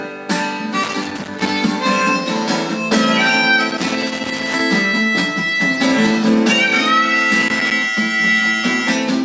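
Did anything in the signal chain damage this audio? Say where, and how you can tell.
Yes. Gain pumping runs through the whole clip. The gain swings by roughly 5 dB, and loud and soft passages sit unnaturally close in level. The likely cause is microphone gain set far too high, with a fast limiter or compressor in the capture chain pulling the level down on every peak and releasing it in the pauses.

Loose connector crackle appears in three bursts, from 0.83 to 1.49 s, from 3.70 to 4.61 s, and from 7.36 to 7.72 s. Each is an irregular spray of scratching and crackle that chops the signal. That points to the analogue wiring: a worn or dirty contact making and breaking as the cable or plug moves, with any DC on the line turning each break into a click.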